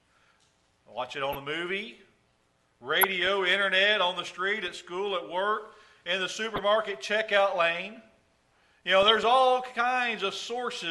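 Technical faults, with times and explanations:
1.31–1.35, 3.01–3.29, 4.68–4.78, 6.48–6.58 and 8.96–9.23 s: DAB burbling. Short noise blips occur where bit errors of about 0.1 to 0.2 percent slip past error correction and corrupt MP2 samples and scale factors, making individual sub-bands jump in level for up to a frame.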